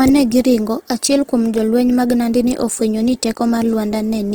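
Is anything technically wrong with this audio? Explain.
Yes. Opus compression damage is plainly audible throughout the speech. It sounds grainy, rough and noisy rather than swirly, though the bandwidth stays full to about 20.1 kHz. This fits Opus music mode at a bitrate near 16 kbps, likely filling starved bands with folded or noise content.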